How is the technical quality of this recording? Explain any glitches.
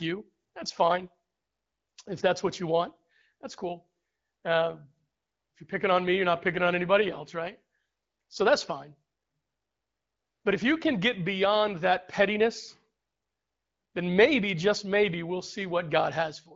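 No glitches turn up here; the speech comes over the kind of wideband HD Voice link you'd expect from AMR-WB at 12.65 kbit/s, with only the light coding character that rate gives.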